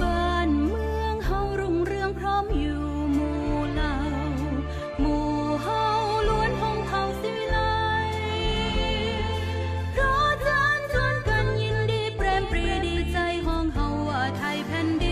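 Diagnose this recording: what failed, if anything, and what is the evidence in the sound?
A doubled audio track runs from 8.52 s to 13.56 s: a second full-band copy trails roughly 0.4 s behind, a few dB quieter, with no decay or room colour, starting and stopping abruptly. The likely cause is a duplicate capture path or misaligned edit.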